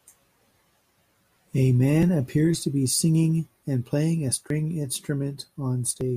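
A recorder likely working in 2.5-second chunks drops audio missing between chunks at 2.03 s, before "appears to be singing", and at 4.50 s, after "singing and playing a", each a skip of about 30 ms.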